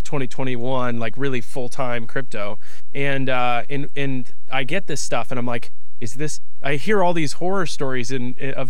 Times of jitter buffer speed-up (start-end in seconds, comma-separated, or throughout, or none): none